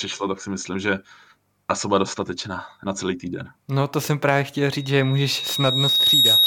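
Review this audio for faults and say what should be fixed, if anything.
A thin whistle at 3.8 kHz appears at 4.71 s and swells over about a second and a half until it sits roughly 10 dB above the speech, running to the end of the clip. This is loudspeaker feedback squeal: the microphone is picking up its own loudspeaker, and at 3.8 kHz the loop gain exceeds one, so that tone keeps building on itself. To prevent it, move or aim the microphone away from the loudspeaker, lower the monitor gain, or notch out 3.8 kHz in the feed to the loudspeaker.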